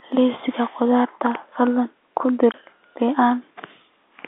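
At 2.52 to 2.54 s the speech drops out for 20 ms, a gap that fits a single lost 20 ms packet. This is packet loss filled with silence: the receiver had nothing to play for that slot and inserted silence instead of concealing the gap. The abrupt cut into silence and the equally abrupt return are heard as a brief hole in the speech. The G.711 telephone coding around it limits the band to roughly 250 Hz to 3.6 kHz.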